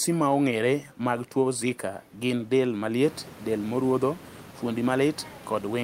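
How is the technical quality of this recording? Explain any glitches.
No technical faults are present.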